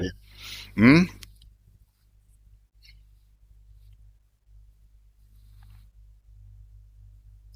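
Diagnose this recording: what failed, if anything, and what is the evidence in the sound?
Nothing stood out on listening to this speech recording that would point to a failure at any stage of the chain.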